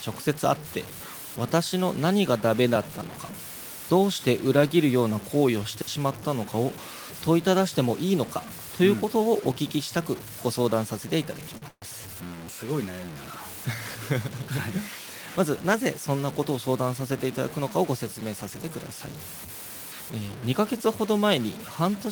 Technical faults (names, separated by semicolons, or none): low bit depth without dither; digital wireless dropout; short stall from a late packet; call audio freeze; jitter buffer speed-up